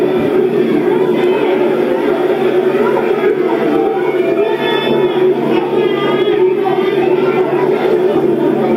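Gain pumping runs through the whole clip, a recording of sounds. The level is pulled down whenever a louder sound arrives and recovers afterward, swinging by around 5 dB. Loud and soft moments sit unnaturally close together, giving a squashed, breathing texture. The likely cause is input gain set far too high, with a fast limiter or compressor clamping down on every peak and releasing between them.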